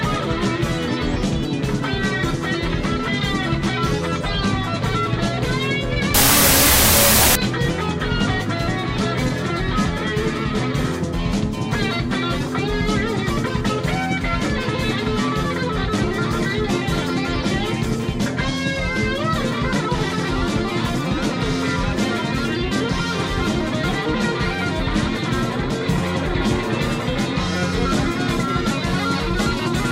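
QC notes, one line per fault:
6.14–7.35 s, wrong sample width: what sounds like 32-bit float data read as 16-bit integers mixes bytes, so loud noise buries the sound, playing at half speed, an octave down.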